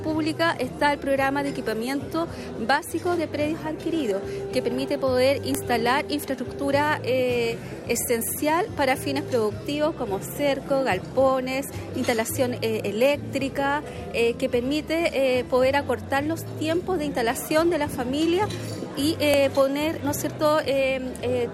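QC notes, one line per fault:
5.55 s and 19.34 s: file header played as audio. Each is a sharp, loud click at the start of a new joined piece. Header bytes left in the stream get read as samples, making an abrupt spike regardless of the surrounding sound.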